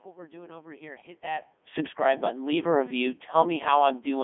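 From start to finish the speech has been through a Codec 2 vocoder, and it's heavily damaged. Instead of carrying the waveform, the codec sends only pitch, voicing, energy and a rough spectral envelope, then rebuilds everything from sine waves. So the voice comes out robotic and buzzy, squeezed into a line band of about 250 Hz to 3.5 kHz, which fits its top 3.2 kbit/s mode. The room noise gets smeared by the resynthesis too, and there is a level change around 1 s, where the talker shifts.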